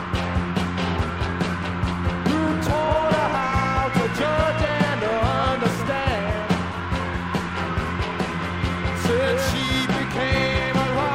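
No technical faults can be heard anywhere in the audio, and the signal stays steady and intact throughout.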